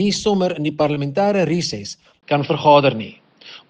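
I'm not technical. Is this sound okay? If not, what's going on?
No. Two things go wrong. At 0.94 to 0.97 s there is a tiny smear or wobble. This is short concealed packet loss: a sliver of the audio arrived too late to be played, so the receiver covered the gap by stretching out the sound that came just before it and then blended back into the real signal. The hole being covered was very short, around a hundredth of a second.

From 2.21 s to the end, the sound suddenly turns duller and a little boxy, as if a blanket went over it. Everything above about 5.6 kHz is gone, there is a brief silent gap of about 20 ms right at the change, and a faint new background hiss appears while the loudness stays about the same. This is likely an input switched to a poorer device, with the system changing mid-recording to a weaker microphone or headset.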